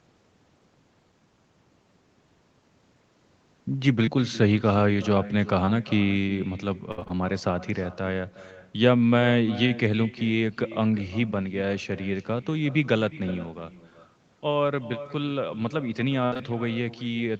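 Echo with no canceller runs through the whole 17-second recording. The far end played this speech over a loudspeaker, its microphone caught it, and nothing subtracted it before sending it back. Every phrase is trailed by a copy about 16 dB quieter, arriving roughly four-tenths of a second later, thinner than the original. It stays present from start to finish.

Short concealed packet loss first appears at 4.05 s and again at 5.65 s. Each time, about 20 ms of audio, which fits a single lost packet, never arrived in time, and the decoder bridged the hole by extending the preceding sound for a similar length before fading back into real audio. Each event lasts about 40 ms in total and sounds like a tiny smear or wobble, and a short consonant can disappear inside it.

Repeated packet loss, heard as robotic sound, covers 6.91 to 7.11 s. Within that 0.2 s span four separate gaps, totalling about 120 ms, were each patched by continuing the last sound, the longest patch being about 61 ms. 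Because roughly 60 percent of the stretch is synthesized fill, the sound turns choppy and robotic, with pieces of speech dropping out between the patches.

A burst of packet loss hits at 16.25 to 16.34 s. About 60 ms in a row went missing, and the decoder held on to the last sound while lowering its level as the gap continued, giving a brief buzzy or hissy fade before the speech jumps ahead with that piece gone. Two more short concealed packet losses follow immediately, at 16.34 and 16.37 s, each about 20 ms missing, adding small smears as the audio recovers. The 8 kHz upper limit of this Opus call path shapes all of this fill.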